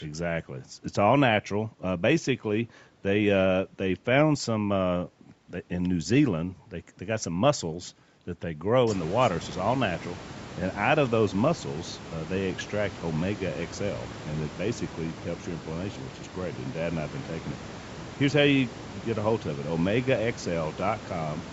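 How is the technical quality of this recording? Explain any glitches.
The recording shows no technical glitches: the speech has the limited top end of call microphone processing, with nothing above 8 kHz, and the room noise behind it rises by about 23 dB at roughly 9 s but stays about 17 dB below the speech.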